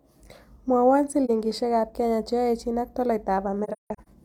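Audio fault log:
1.25 to 1.30 s, AAC frame loss with muting: a single 43 ms gap, consistent with one lost frame whose spectrum the decoder zeroed. The overlapping windows fade the sound out and back in, leaving a brief dip.
3.64 to 4.08 s, AAC frame loss with muting: about 300 ms of scattered dropouts, roughly seven frame-lengths, with the longest silence about 150 ms. Each fades rather than snaps.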